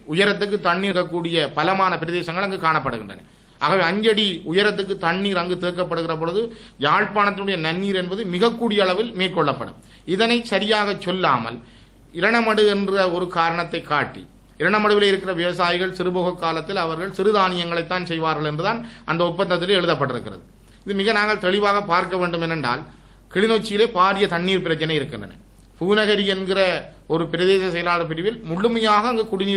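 At 0.91 s there is a skip ahead. Around a fifth of a second was dropped, and playback jumps forward with almost no gap. From 1.49 to 2.10 s, a jitter buffer speed-up trims short pitch-period slices to reduce excess delay. The sound runs at 105 percent speed, at unchanged pitch, and feels slightly hurried.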